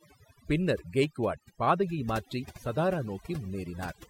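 Noise reduction on this speech recording was set far too aggressively, so overdone noise removal runs throughout: bands near the estimated noise floor are cut almost to nothing, leaving near-silent pauses speckled with twinkling artefacts, and quiet parts of the voice are cut away with them.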